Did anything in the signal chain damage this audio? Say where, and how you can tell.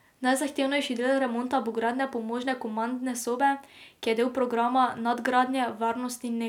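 No, nothing in the signal chain audibly damaged this speech recording, and every stage from capture to playback delivered it intact.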